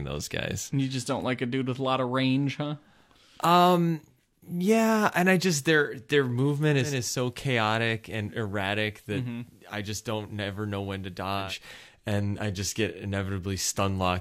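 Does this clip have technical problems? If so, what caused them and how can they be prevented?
Yes. From 6.76 to 11.55 s, digital radio blending to analogue FM: a 193 ms cross-fade brings hiss roughly 35 dB down and a waveform about 6 dB lower. Better reception or an external antenna keeps the digital signal locked, so the receiver never falls back to FM.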